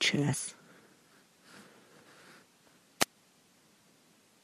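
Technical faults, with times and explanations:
0.33 s: compressed frames skipped. Several frames of the encoded stream never reach the output, so the audio leaps forward by roughly 150 ms, which fits about seven 23 ms frames.
3.00–3.05 s: wireless microphone noise hit. For about 50 ms the FM radio link fades as reflected paths cancel, letting receiver noise rise over the signal. The result is a brief swish of static.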